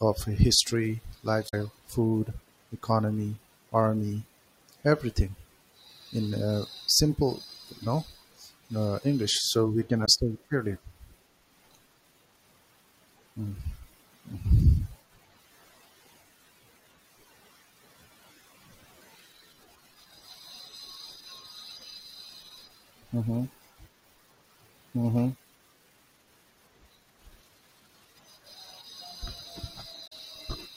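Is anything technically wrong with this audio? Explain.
Yes. There's damaged data in the compressed stream, at 1.45 to 1.54 s, 10.02 to 10.08 s and 30.04 to 30.13 s. Corrupted bytes there make the decoder misread frames and lose sync until it finds the next valid header, so each spot comes out as a brief glitch breaking into the speech.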